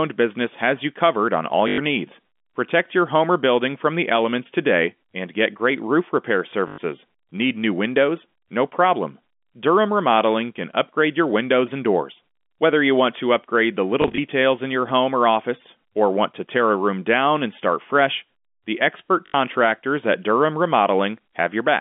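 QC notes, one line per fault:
1.68–1.78 s, 6.68–6.78 s, 14.02–14.18 s, 19.26–19.34 s: packet loss with last packet repeated. Lost stretches of 80–100 ms, consistent with 20 ms packets, are refilled by replaying the previous block, producing a robotic stutter. The 14.02 s event is instead scattered single-packet blips over 160 ms. On the waveform these appear as identical repeating 20 ms segments, and on the spectrogram as frozen, striped frames with vertical seams at the joins.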